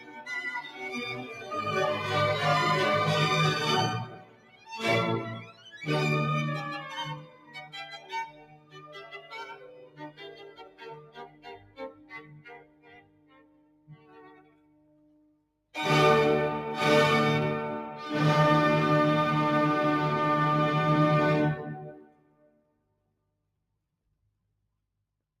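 A speech noise suppressor runs on this audio throughout. It treats steady sound as noise, so the level pumps over a swing of about 20 dB. The noise suppressor cuts sound at 0.0–0.28, 0.65–0.82, 1.21–1.51, 4.05–4.7, 5.43–5.72, 7.23–15.74, 21.88–23.42 and 24.07–24.76 s. Drops reach about 5 to 14 dB, with sustained sound and decays sinking most.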